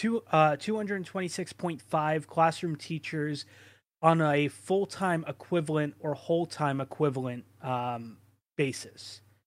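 No technical faults occur anywhere in the recording.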